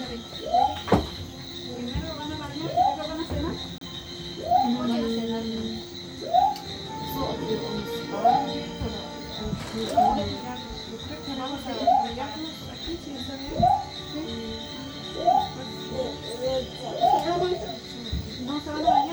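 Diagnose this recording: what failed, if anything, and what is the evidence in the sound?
At 3.78 s the sound drops to dead silence for about 31 ms and resumes at 3.81 s, a brief clean gap in playback. This is likely a Bluetooth stall: packets were delayed, the headphones' buffer emptied, and output paused until retransmitted audio arrived.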